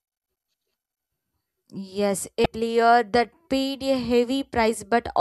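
At 2.43 to 2.46 s, damaged data in a compressed stream makes the decoder misread frames and lose sync, leaving a brief glitch just before "that paid a".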